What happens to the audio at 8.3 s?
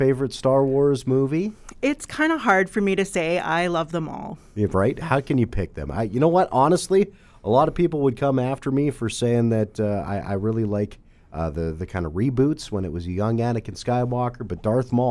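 Nothing goes wrong at 8.3 s; the audio carries on intact through that moment.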